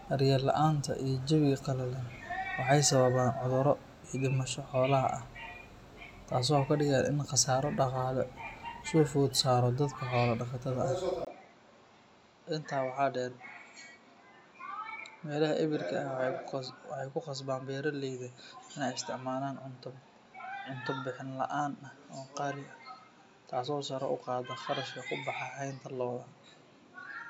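At 11.25 s the speech drops out for about 20 ms, then returns duller and about 5 dB quieter, with nothing above 7.4 kHz and a faint new noise floor through to the end. The narrower band and changed character likely mean the input switched to a poorer device.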